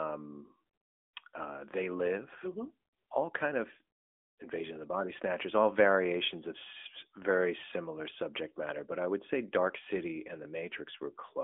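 Speech passed throughout through the AMR narrowband mobile codec, its damage fitting a mid-rate mode near 10 kbps: band limited to 250 Hz–3.5 kHz, nothing above 3.7 kHz, with plainly audible buzzy, synthetic coloration.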